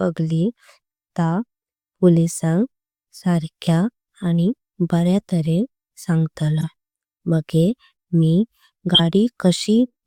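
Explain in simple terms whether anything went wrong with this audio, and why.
Some of the compressed data was damaged and the decoder played it anyway, a corrupt frame decoded. Each time, sound lands at the wrong pitches: a brief blip at 6.61–6.64 s, and a louder burst at 8.95–9.00 s, about two frames' worth.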